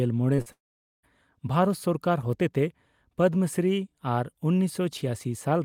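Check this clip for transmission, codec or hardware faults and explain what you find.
Three transmission faults appear in the first second, all losses of network audio.

Two short concealed packet losses come close together, at 0.35 to 0.40 s and 0.42 to 0.48 s. In each, a burst of packets arrived too late for the decoder, about 20 ms of audio the first time and 40 ms the second. The receiver extended the preceding sound to cover each gap and then blended back into the real signal. The result is a pair of brief smeared wobbles in quick succession, with the second twice as long.

A long network dropout follows at 0.52 to 1.05 s and is likely the cause of the much bigger gap. Roughly half a second of audio never arrived. The concealer keeps stretching the last sound for a moment, producing a fading buzz or hiss, then gives up. That leaves about 0.47 s of near silence before the audio returns. 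What was sent during that stretch is missing outright, so the sound picks up again further along, with the lost portion simply skipped.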